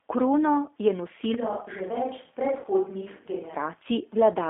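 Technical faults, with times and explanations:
Throughout: G.729 codec. The speech is confined to a narrow telephone band of about 300 Hz to 3.5 kHz and sounds plainly rough and synthetic, because an 8 kbit/s coder rebuilds each 10 ms frame from a vocal tract filter, a pitch predictor and a few pulses.
1.34 to 3.54 s: switch to a distant microphone. The voice suddenly turns roomy and hollow, loses bass, drops roughly 5 dB and gains faint room noise, then snaps back. This likely comes from the recording falling back to a microphone further from the talker.
2.60 to 2.66 s: VoIP packet loss concealed by the speech codec. About 40 ms of audio vanishes and is smeared into a fading extension of the preceding sound, which points to two lost packets. The decoder extrapolates its last pitch and filter with falling gain, leaving the voice briefly weakened.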